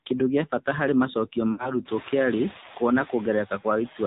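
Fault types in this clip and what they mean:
noise suppressor artifacts: The background noise sinks between the words and rises under them, most noticeable once the room noise steps up around 2 s and sits about 19 dB below the speech. The suppressor pulls steady noise down by only about 3 dB frame by frame.
AMR narrowband mobile codec: The voice is muffled, buzzy and somewhat synthetic, with nothing above 4 kHz and a swirly quality in the background. This is AMR-NB coding, which rebuilds speech from a vocal-tract model, and the damage points to a low rate such as 7.4 kbps.
lost AMR speech frames: From 1.52 to 1.76 s, between "gĩa bata harĩ macokio" and "kĩrarĩ kuona", the sound smears, stretches and sags before recovering roughly. The decoder repeated its last good settings with falling gain, which fits about 60 ms of missing audio, or three 20 ms frames.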